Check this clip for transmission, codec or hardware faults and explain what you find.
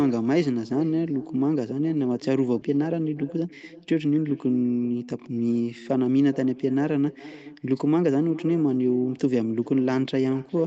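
There are three faults here: an echo running the whole way through, and a skip followed by a hurried patch near the start.

The echo with no canceller is present throughout. Everything in the speech comes back roughly 0.4 s later, around 400 ms, at about 18 dB below the original. The far end is playing the call out of a loudspeaker, its mic picks that up, and nothing strips it out before it returns. The result is a faint, thin shadow trailing every phrase.

At 2.61 s there's a skip ahead. Roughly a second of speech simply isn't there, and playback jumps straight across with no gap filling the join. That points to a chunk being lost in transit or dumped by an overflowing jitter buffer while newer audio was already queued. The two sides are butted together almost directly, so it sounds like an abrupt lurch forward.

From 2.69 to 5.08 s there's a jitter buffer speed-up running at 117%, trimming something like 400 ms in total. 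The buffer was holding more than it wanted, probably after delayed packets arrived in a bunch, so it kept cutting out tiny pitch-period slices to catch up. Pitch stays put but the delivery sounds rushed. The Opus call path's top end stops at 8 kHz, which is ordinary for this kind of link.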